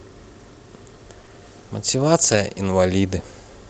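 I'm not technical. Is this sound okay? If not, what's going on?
No. There are two separate problems, both from bits of the call going missing on the way.

Short concealed packet loss, from about 1.21 to 1.25 s and again from 1.25 to 1.29 s. Two tiny back-to-back pieces of the speech never arrived in time. The receiving end covered each hole by stretching out the sound just before it and then blending back into the real audio. You hear a quick smear or wobble there rather than silence.

Lost packet rebuilt from error correction, from about 2.31 to 2.41 s. Here a few more pieces went missing, but each following piece carried a rough backup copy of the one before. The receiver played those backups, so there's no gap. About six hundredths of a second of speech comes from these stand-ins, which is why that moment sounds grainier and noisier than the rest.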